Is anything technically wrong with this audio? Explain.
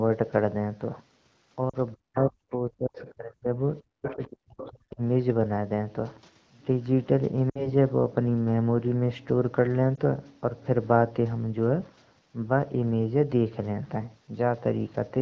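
Yes. The speech has brief dropouts from lost AMR speech frames, stretches where it is suppressed during double talk, and faint scraps of the other side's voice leaking through.

Lost AMR speech frames occur at 1.70 to 1.76 s (40 ms), 7.49 to 7.71 s (60 ms) and 9.95 to 10.00 s (20 ms). When a frame is corrupted, the decoder repeats the last good pitch and spectral shape at falling gain. The result is a short dip that drops to near silence within two frames, and the voice comes back weak or rough for a moment. Unlike the suppression below, these are tens of milliseconds long.

Speech suppressed in double talk runs from 1.95 to 3.48 s and from 3.95 to 5.01 s. In each stretch, about a second of speech dips or cuts out in pieces, falling by up to about 40 dB. The likely cause is an echo canceller that could not separate the talker from the loudspeaker echo while both sides spoke, so it turned everything down. 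Unlike frame loss, the gaps are choppy.

The other side's voice leaking through is heard at 2.98 to 3.11 s, about 20 dB below the speech, and at 4.04 to 4.28 s and 4.61 to 4.68 s, about 15 dB below. These are scraps of a second voice, likely echo that was not fully cancelled from the loudspeaker. They fall inside the suppressed stretches, which tells them apart from background talkers in the room.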